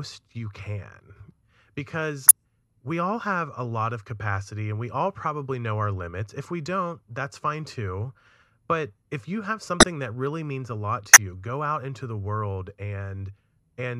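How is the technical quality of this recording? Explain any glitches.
The recording has three short glitches, all of the same kind: a corrupt frame decoded. They occur at 2.28–2.31 s, between "you can because" and "we all have a"; at 9.80–9.83 s, between "but if you have" and "that really means a"; and at 11.13–11.17 s, between "really means a lot" and "you go out into". Each burst spans two or three compressed frames. The decoder played frames whose bits had been flipped, so misread gains and codes put energy at the wrong frequencies and produced a chirp or noise blip. A lost frame would be concealed by silence or a smeared repeat, but here unrelated energy is inserted instead.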